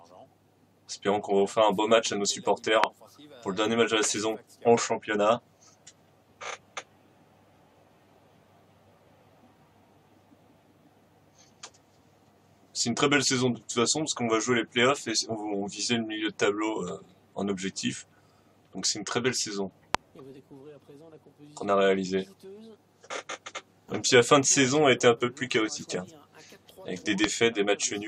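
A sudden voltage step or spike, most likely from a plug, switch contact or static discharge, enters the signal path three times, and each one is heard as a single loud pop lasting about 20 ms. The first comes at 2.84 s and the second at 19.95 s, both standing roughly 25 dB above the surrounding level. The third, at 27.24 s, is somewhat softer at about 20 dB. The sound continues underneath each pop without interruption.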